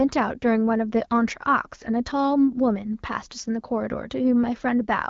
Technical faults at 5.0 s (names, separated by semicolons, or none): none